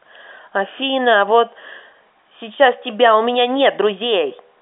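Speech over an ordinary G.711 telephone path, its band running from about 250 Hz to 3.6 kHz with nothing above 3.8 kHz, and no technical faults to report.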